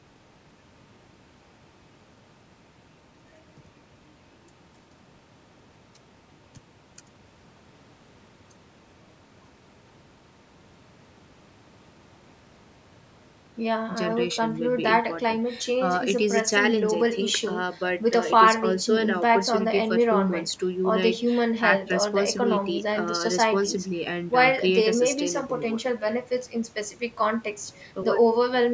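No technical faults can be heard in this recording.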